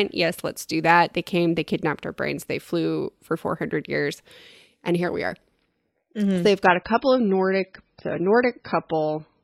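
At 6.66 s the speech drops to an adaptive stream at a lower bitrate and stays there to the end. Bandwidth fell, so playback switched to a much leaner encode, which fits a move from about 128 to 16 kbit/s MP3. Codec artefacts rise. Nothing remains above 5.6 kHz. The change is sudden, with no gap.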